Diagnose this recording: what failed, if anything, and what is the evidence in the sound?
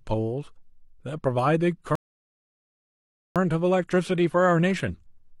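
Playback rebuffering stall. The player ran out of downloaded audio at 1.95 s. Silence follows. Speech resumes unbroken at 3.36 s, adding 1.4 s.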